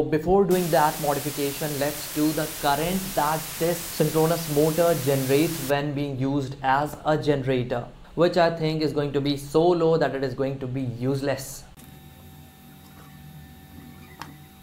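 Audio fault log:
0.51–5.70 s, low bit depth with dither: steady, even hiss only about 10 dB below the sound, no distortion; dithered rounding to roughly five bits.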